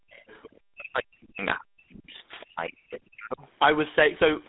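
Speech squeezed through the GSM full-rate codec for the whole clip. Nothing comes through above 3.8 kHz, the line band sits around 200 Hz to 3.7 kHz, and the gravelly, buzzy roughness is plainly audible. That fits the 13 kbit/s pulse-excited coder, which rebuilds the vocal tract from sparse excitation pulses. The bass roll-off from the call's microphone processing is just its normal high-pass. The speech also ducks out from 0.0 to 0.3 s, 0.6 to 2.14 s and 2.45 to 3.43 s, dropping as much as about 40 dB. That's likely speech suppressed in double talk: the echo canceller couldn't tell the talker from the loudspeaker echo and pulled both down. Between those stretches, at 0.3 to 0.58 s and 2.4 to 2.46 s, you get the other side's voice leaking through, roughly 25 to 30 dB under the speech, where echo cancellation likely left remnants in the microphone.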